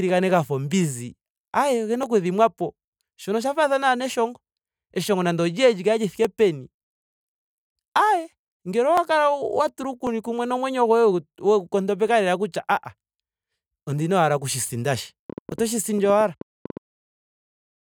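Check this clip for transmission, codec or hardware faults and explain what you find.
Two kinds of fault are present in this speech recording: isolated dropped samples and a short train of clicks.

At 2.03, 6.25, 8.98, 10.07, 12.08 and 15.52 s the stream likely lost a tiny run of samples, about 0.7 ms each. The waveform jumps abruptly to a later value, producing a single sharp click with nothing audibly missing.

From 15.30 to 16.78 s a burst of pulses, likely from interference or a faulty connection, rides over the speech. Around fifteen similar clicks arrive unevenly, at about 8.8 per second, peaking a few decibels above the speech, and are heard as irregular popping.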